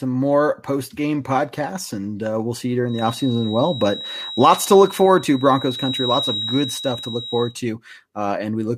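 From 2.84 s, just after "uh we'll see you", until 7.56 s, a thin feedback whistle near 3.8 kHz sits roughly 10 dB under the speech, swelling and fading slowly. It is likely a loudspeaker-to-microphone loop held at the edge of oscillation. Unlike a runaway howl, it never builds.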